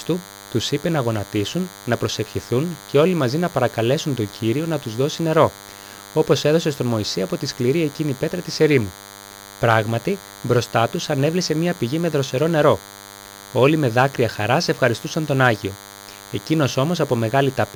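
A nearby DECT cordless phone or its base station is transmitting a short radio burst every 10 ms, and the audio circuit rectifies each one. The result is DECT cordless phone buzz throughout: a steady, thin 100 Hz buzz rich in harmonics, sitting roughly 20 dB below the sound.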